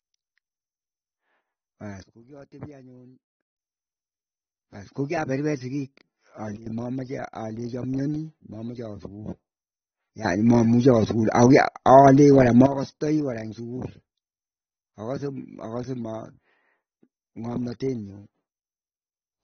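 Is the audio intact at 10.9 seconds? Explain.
No. A sudden gain jump covers 10.25 to 12.66 s, so 10.9 s falls inside it. The level leaps by about 12 dB in a single sample just before "kora ing sukul" and falls back just as abruptly. That step was likely caused by a gain setting or bit shift applied with no ramp. Speech and background noise rise together, so the raised stretch sounds louder overall, not just closer, and its edges can click.

The same moment also carries AAC compression, which runs through the whole clip. Nothing is left above 6.4 kHz, so the speech sounds dull and lacks air. The coarse quantisation leaves a smeared, warbling, fizzy texture on sibilants and held sounds. This damage is plainly audible and points to AAC-LC at a low bitrate of roughly 27 kbps. At 10.9 s it is heard at the boosted level.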